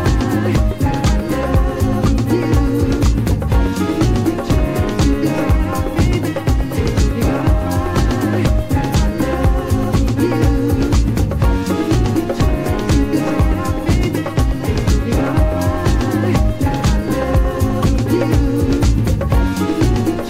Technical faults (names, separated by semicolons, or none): none